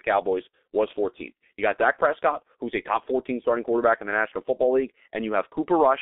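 The G.723.1 codec colours the whole speech clip. The sound is confined to roughly 250 Hz to 3.6 kHz. Heavy coding damage makes it muffled and hoarse, with smeared consonants. The coarse, slow-updating voice model points to a very low rate near 6 kbit/s.

From 0.50 to 0.53 s comes VoIP packet loss concealed by the speech codec. About 30 ms of audio went missing, which fits one lost 30 ms frame. The decoder filled the gap by repeating its last pitch and filter at falling gain. A brief stretched, fading sound replaces the real sound.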